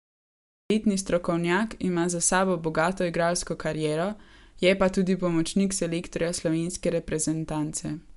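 A cut-off start runs from 0 to 0.70 s in this speech clip: the file opens on digital silence, and at 0.70 s the speech appears abruptly partway through a sound rather than building up from its natural onset. There is no attack and no fade-in. Capture or streaming evidently began late, so whatever was being said before the recorder engaged is missing, and the first audible sound is truncated at the point where the audio begins.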